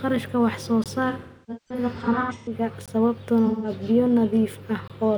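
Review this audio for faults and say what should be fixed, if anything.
Gap between chunks: three hard-edged holes of 20 ms sit at 0.84–0.86 s, 2.86–2.88 s and 4.88–4.90 s, spaced 2 s apart, matching a 2-second chunk length. Nothing is lost; playback simply stalls at each join, likely from a player starting each chunk late or from codec padding. On a waveform each shows as a flat line with abrupt edges, and a spectrogram shows a thin, fully blank vertical stripe. Prevent it by using gapless chunk handling that trims padding and schedules each chunk to start exactly where the previous one ends.

AAC frame loss with concealment: from 1.10 to 2.53 s about 0.9 s of audio is missing in scattered bursts, the longest roughly 0.3 s, and the decoder patches each hole by reusing the last good spectrum. The result sounds smeared, noisy and phasey, sagging toward quiet during the longer runs. A shorter patch of about 0.17 s follows at 3.46–3.70 s. 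A spectrogram shows blurred, horizontally stretched bands without clear harmonics, and the waveform shows noise-like stretches with a decaying envelope. Prevent it with a transport that retransmits or protects frames (for example, with forward error correction) and a larger jitter buffer.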